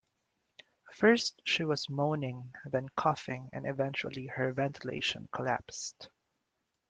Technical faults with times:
4.97-5.01 short concealed packet loss

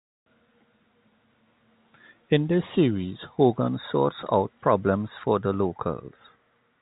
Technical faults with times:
none

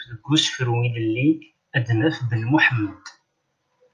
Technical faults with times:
none

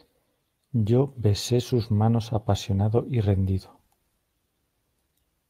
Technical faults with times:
0.00-5.49 clock drift between sender and receiver
0.09-5.20 repeated timing corrections

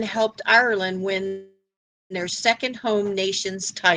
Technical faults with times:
1.27-2.13 call audio freeze

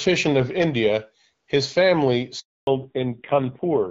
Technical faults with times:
2.39-2.67 handover gap
2.67-3.90 fallback to narrowband

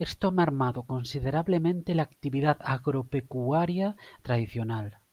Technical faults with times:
none

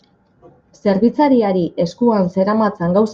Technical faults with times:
none

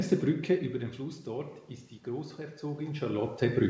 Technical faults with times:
2.36-3.69 automatic gain rising

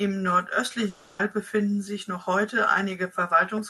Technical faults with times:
0.89-1.21 long network dropout

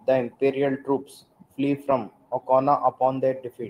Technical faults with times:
none

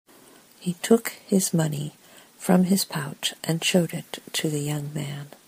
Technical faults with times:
none

